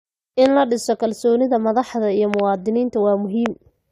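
Speech clip with three loud pops well above the speech, at 0.46–0.48 s before "la dhiso", a double pop at 2.34–2.42 s after "madaxda iyo", and 3.46–3.48 s, likely electrical transients.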